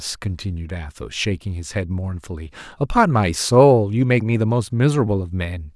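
No technical faults are audible.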